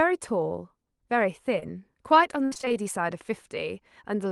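At 1.59 to 1.63 s the speech gives a brief smear, a tiny wobble where the sound seems stretched. This is short concealed packet loss: about 20 ms of audio arrived too late, and the decoder filled the hole by extending the preceding sound before blending back.

From 2.45 to 2.74 s the speech turns choppy and robotic, with fragments missing. This is repeated packet loss: about six holes in quick succession, the longest 60 ms, each patched by continuing the last sound, so over half that stretch is synthesized.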